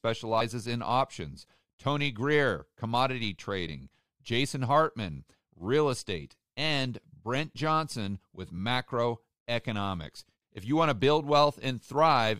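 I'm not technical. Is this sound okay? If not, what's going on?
No. The speech jumps forward three times, at 0.40 s, 3.67 s and 8.57 s. This is called compressed frames skipped. The file stores sound in short chunks of about 23 ms. Some chunks were lost or rejected as damaged, so playback leaps ahead. The first jump comes just before "in options" and drops around 50 ms, likely two chunks. The second drops about 20 ms, and the third about 50 ms.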